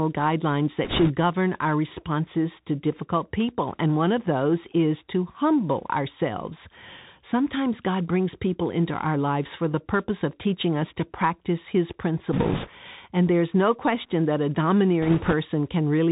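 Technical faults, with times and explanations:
Throughout, Bluetooth CVSD headset codec. The speech is squeezed into the narrowband headset path, and the sound fits a 64 kbps CVSD link. Each sample is coded as a single up-or-down step, so nothing above 4 kHz survives. S sounds turn scratchy, and a granular hiss sits underneath.
0.84 to 1.11 s, 12.33 to 12.69 s and 15.02 to 15.34 s, bit errors on a Bluetooth voice link. Around four to five percent of bits get flipped. No bit outweighs the others and errors die away fast, so there are no loud clicks. Instead a rushing, crackly noise lies over the speech.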